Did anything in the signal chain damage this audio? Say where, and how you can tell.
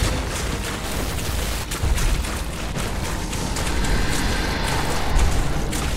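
Yes. From 0.84 to 1.64 s the sound turns harsh and buzzy, with a gritty edge riding on the waveform. That points to a likely stuck bit at the converter or its data lines, forcing roughly half the samples off by a fixed step of about -25 dBFS.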